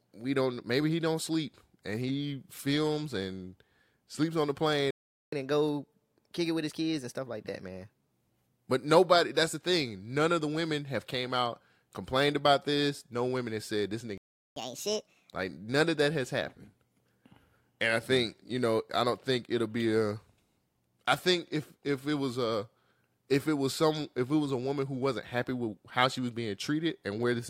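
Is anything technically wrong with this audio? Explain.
Yes. The speech twice drops out mid-flow and then runs fast and high while the player catches up.

Playback stall, at 4.91 to 5.32 s (about 0.42 s) and 14.18 to 14.56 s (about 0.39 s): the sound cuts to silence mid-phrase, then resumes. The likely cause is the player starving for data or its thread being blocked. On a waveform each stall is a flat line; on a spectrogram, a blank vertical band across all frequencies.

Catch-up at higher speed, at 5.32 to 8.11 s and 14.56 to 15.34 s: after each stall the player resamples its backlog faster to regain lost time. The first stretch runs at 1.15 times speed, raising pitch about two semitones. The second, shorter one runs at 1.5 times, roughly seven semitones up. On a spectrogram, harmonics and formants shift upward and syllables compress horizontally, then drop back to normal spacing.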